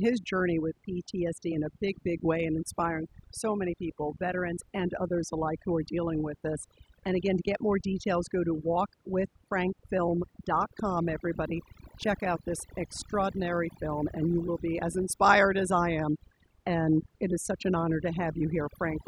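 Overdone noise removal runs throughout the speech, with frequency bands near the noise estimate pushed to silence, leaving twinkling specks between phrases.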